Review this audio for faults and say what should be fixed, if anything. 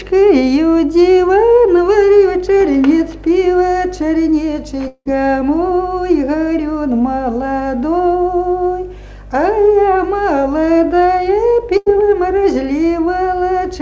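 From 4.88 to 5.08 s, the last sound is stretched into a fading buzz or hiss, then about 50 ms of silence, and about 180 ms of audio never returns. This is likely a long network dropout. Preventing it requires a more stable network link, or redundancy such as forward error correction so a lost stretch can be rebuilt.

At 11.77 to 11.89 s, a burst of packet loss removes about 90 ms, which the receiver covers with a decaying continuation of the preceding sound before playback resumes further on. Enabling packet redundancy or FEC on the G.722 stream, together with a slightly deeper jitter buffer, would reduce such gaps.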